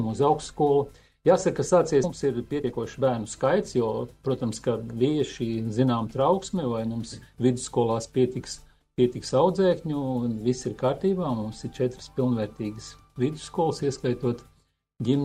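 At 2.03 to 2.05 s the sound jumps abruptly forward, with no gap and no fill between the two sides of the cut, so the material on either side is butted straight together. This is a skip ahead: roughly 0.7 s of audio was discarded, either lost in transit or dropped when the jitter buffer overflowed with later audio already queued behind it, and playback resumed from that later point.

Right after, from 2.13 to 4.38 s, the sound runs noticeably quick and hurried while its pitch stays unchanged, at about 112% of normal speed. This is a jitter buffer speed-up: the buffer was holding more audio than its target, so the receiver repeatedly cut out short slices a pitch period or so long, shaving off roughly 0.3 s in total to pull the delay back down.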